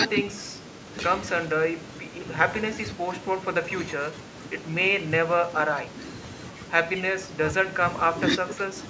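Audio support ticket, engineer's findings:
No fault found in the speech audio; room noise sits about 28 dB below the speech, and the call microphone processing leaves nothing above 8 kHz, both as expected.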